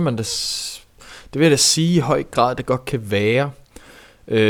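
No technical faults can be heard anywhere in this speech recording.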